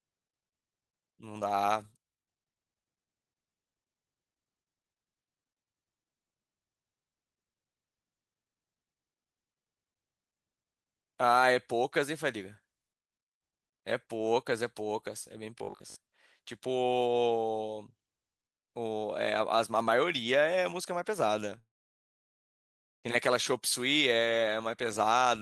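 At 15.58 to 15.96 s the speech goes robotic, a stiff metallic buzz at 50 Hz, likely from 20 ms buffers being repeated for roughly half that stretch. Then a long network dropout hits from 21.59 to 23.06 s: a brief fading tail, about 1.4 s of silence, and the speech resumes with that chunk missing.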